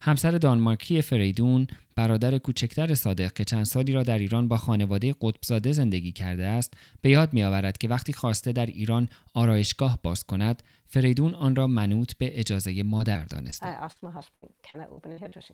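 From 12.97 to 15.34 s the speech suffers repeated packet loss (robotic sound): eleven short gaps, none longer than 62 ms, are each papered over by extending the preceding sound. Unlike a single dropout, the recurring patches give a choppy texture.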